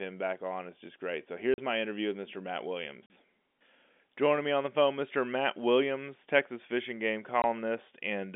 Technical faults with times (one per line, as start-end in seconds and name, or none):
1.54-1.58 packet loss filled with silence
3.06-3.10 packet loss filled with silence
7.42-7.44 packet loss filled with silence